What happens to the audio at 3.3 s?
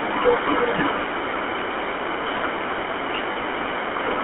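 Lost GSM frames cut into the audio from 3.32 to 3.37 s, a 40 ms gap that fits two dropped 20 ms frames. The decoder fills the hole by repeating the last good frame's settings, so the sound is briefly held as a rough, metallic ring.

Under that dropout, as across the whole clip, the GSM full-rate codec is plainly audible. It builds the voice from a vocal-tract model driven by sparse, regularly spaced pulses, giving a buzzy, gravelly roughness that fits 13 kbps full rate, within a line band of about 250 Hz to 3.4 kHz.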